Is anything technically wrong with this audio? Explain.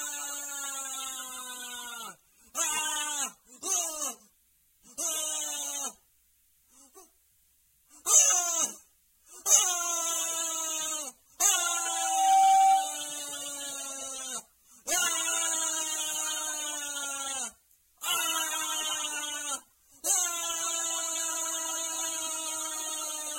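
Yes. From 11.54 to 13.14 s there is loudspeaker feedback squeal. A microphone re-amplifies its own speaker output, so a 772 Hz tone swells over under a second to roughly 10 dB above the sound.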